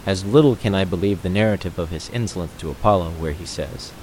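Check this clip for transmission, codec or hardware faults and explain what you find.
No transmission, codec or hardware faults.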